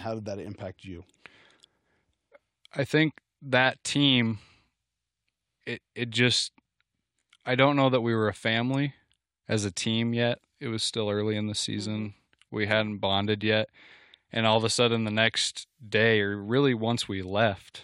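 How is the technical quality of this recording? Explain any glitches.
No technical faults are audible.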